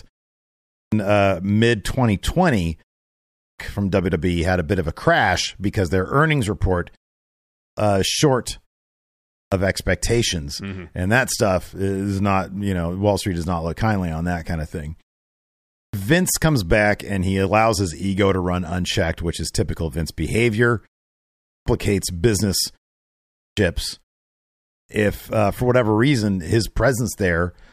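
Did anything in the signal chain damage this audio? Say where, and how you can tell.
Yes, at playback: a clipped start after a pause at 0.4, 3.12, 7.22, 9.0, 15.4, 21.18, 23.05 and 24.33 s. After each gap of roughly 0.4 s, the output device sleeps, and about half a second is swallowed while it wakes, so speech like "of expectations" snaps in abruptly.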